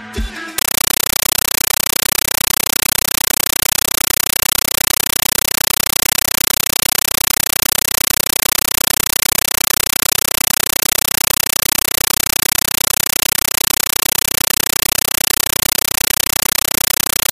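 From 0.58 s to the end, the sound is replaced by loud chattering static: a compressed stream played as audio. An AC-3 bitstream is being treated as PCM rather than decoded. The waveform shows 9.3 ms noise bursts repeating 31.25 times a second between flat zero padding. A spectrogram shows them as broadband vertical stripes; the stream is 448 kbps.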